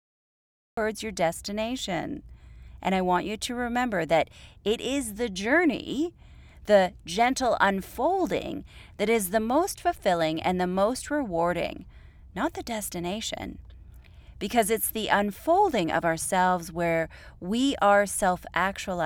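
The clip opens with a cut-off start: from 0 to 0.77 s there is only digital silence, and the speech then begins abruptly mid-sound at 0.77 s rather than rising from a breath or onset. Capture evidently started late, so the beginning of the utterance was never recorded. On a waveform this shows as a flat silent line ending in a sudden edge. A spectrogram shows an empty band followed by a hard vertical boundary.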